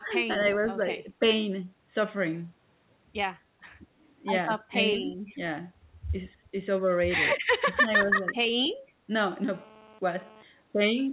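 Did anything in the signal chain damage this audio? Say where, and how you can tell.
Yes. In the call processing, the echo canceller is the likely culprit for short dips at 0.0–0.07, 4.71–4.76, 5.01–5.08, 6.35–6.4 and 7.69–8.27 s, some shallow and some as deep as about 20 dB. That's speech suppressed in double talk: with both ends talking at once, the canceller ducked the near talker along with the echo.

Also in the call processing, there's a faint echo leak at 0.41–0.45 s, a delayed copy sitting 189 ms behind the speech and about 25 dB down. That most likely means the far end's loudspeaker echo wasn't fully cancelled and a scrap got sent back.

In the analogue wiring, a hard, raspy GSM phone buzz at 217 Hz, rich in harmonics and about 25 dB below the signal, runs from 9.52 to 10.43 s. It comes and goes because the nearby 2G phone is sending data in bursts, which the audio circuit rectifies into buzz.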